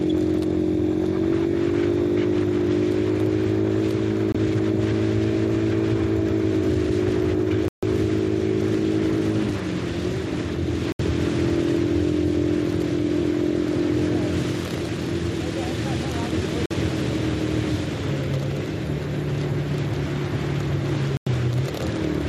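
Digital broadcast dropouts cut the audio at 4.32–4.35, 7.68–7.83, 10.92–11.0, 16.66–16.71 and 21.17–21.27 s. The receiver muted while frames were lost, and the 24 to 144 ms gaps fit whole 24 ms frames. Each gap shows as a flat waveform stretch and a blank vertical stripe on a spectrogram.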